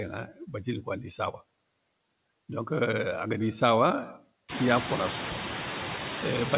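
A speech clip heard through a narrowband call path, with nothing above 4 kHz, which fits G.711. Noise suppressor artifacts run throughout: background is pulled down about 18 dB between phrases, unlike steady room noise. Speech cut by the noise suppressor occurs from 0.28 to 0.54 s, where speech dips up to about 9 dB and sounds swallowed, not a dropout's silent gap. The room noise swelling around 4.5 s is genuine background.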